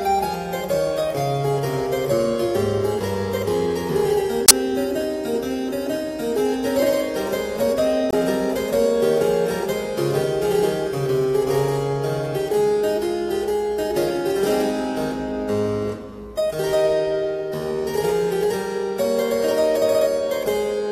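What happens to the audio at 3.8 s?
Nothing goes wrong at 3.8 s; the audio plays through that moment intact, with no dropout, click or distortion.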